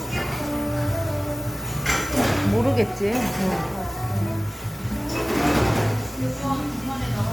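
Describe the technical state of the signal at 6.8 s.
At 6.8 s the sound carries generation loss, present throughout the clip: likely repeated MP3 encoding at 128 kbit/s, around seven passes, each requantising on a shifted frame grid. Unlike a single low-bitrate encode, the smearing, swirl and hollowness pile up and attacks blur, though the band still extends to 20 kHz.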